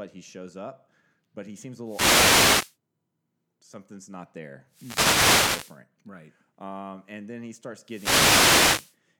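At 1.84 to 2.76 s, 4.69 to 5.82 s and 7.84 to 8.98 s the speech is hit by a wireless microphone noise hit, each lasting about a second. The radio link from an analogue FM transmitter fades as reflected paths cancel, so receiver noise rises over the voice as a swish of static. Unlike a digital dropout, the sound is not cut to silence. Unlike steady hiss, the noise swells and recedes with the fade.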